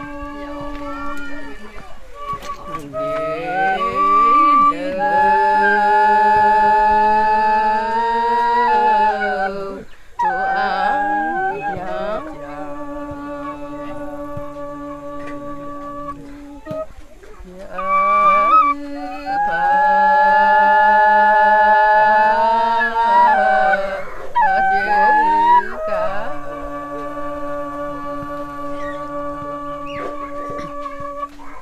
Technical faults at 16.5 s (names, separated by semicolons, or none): none